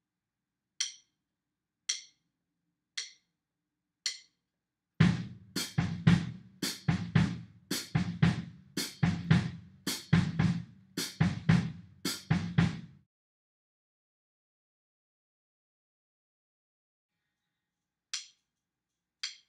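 Nothing stood out as a technical problem on listening to this recording.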